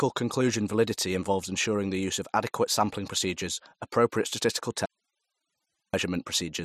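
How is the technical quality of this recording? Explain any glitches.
The recording has one clear glitch, an audio dropout to a faint residue. From 4.86 to 5.94 s, just after "sampling procedures appropriate statistical", the speech signal was likely lost upstream while the path kept running. The voice cuts out abruptly for about 1.1 s, leaving only hiss roughly 50 dB below the speech, then returns mid-flow.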